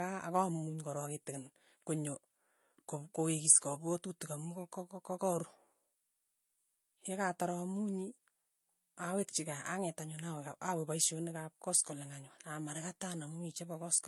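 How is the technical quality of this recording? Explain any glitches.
Quality is held back by one problem that runs through the whole clip. The speech stops at about 12.1 kHz and carries two different kinds of codec smear at once, likely from transcoding between lossy codecs, something like a low-bitrate MP3 re-encoded to HE-AAC.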